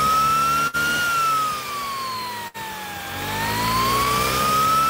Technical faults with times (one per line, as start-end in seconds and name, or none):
0.67-0.76 burst of packet loss
2.47-2.57 burst of packet loss